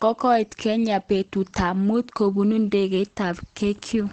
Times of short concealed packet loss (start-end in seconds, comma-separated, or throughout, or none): none